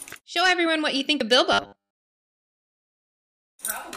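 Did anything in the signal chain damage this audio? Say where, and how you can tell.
Yes. From 1.53 to 2.35 s the sound turns into a rigid, metallic buzz at a fixed 100 Hz. That is robotic sound from repeated short buffers, likely at the driver or buffer stage. New audio is arriving too slowly, so the software loops the last block instead. A 100 Hz buzz means a block about 10 ms long. Most of that stretch, roughly two thirds or more, is repeats rather than fresh audio.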